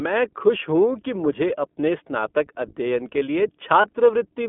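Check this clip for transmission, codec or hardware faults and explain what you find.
Two faults: the whole clip runs through the iLBC codec, and there's one short dropout from lost iLBC frames near the end.

iLBC codec, throughout: the speech is squeezed into roughly 200 Hz to 3.5 kHz and sounds plainly rough and synthetic. That fits the 15.2 kbps mode coding each 20 ms frame independently.

Lost iLBC frames, 3.82 to 3.85 s: a brief buzzy, held-vowel smear where the decoder repeats the last pitch cycle with noise. It fits one lost 20 ms frame and recovers immediately.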